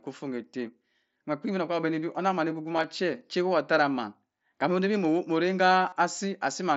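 Voice packets between the Bluetooth headset and the phone dropped out twice in this speech recording, and the receiver masked each gap by repeating the closest-matching stretch of recent waveform. This concealed Bluetooth headset packet loss first appears at 2.76 to 2.84 s, right after "onnam man", as short scattered holes of about 7.5 ms at most. It returns at 5.88 to 5.93 s as roughly 38 ms of patched audio, where a brief buzzy, held tone and a slight warble can be heard, all over the wideband mSBC link.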